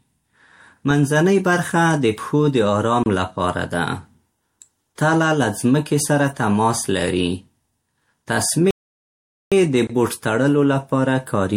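A gap at a join of encoded pieces sits at 3.03 to 3.06 s, between "د پښو د آرام" and "لپاره ده". Separately encoded segments were joined with their encoder delay and end padding left in, so the speech drops out for about 28 ms with smeared edges and then resumes exactly where it stopped.

A playback stall follows at 8.71 to 9.52 s. The speech halts mid-flow for about 0.81 s, then picks up again at "د بوټ تړلو لپاره". The player most likely ran short of data or had its output thread blocked.

A second gap at a join of encoded pieces falls at 9.87 to 9.90 s, just before "بوټ تړلو لپاره". This 24 ms silence has the same soft-edged dropout, and it comes one 6 s segment after the first join once the stall's delay is taken out.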